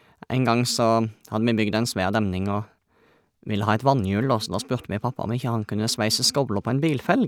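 No technical faults can be heard anywhere in the recording, and the signal stays steady and intact throughout.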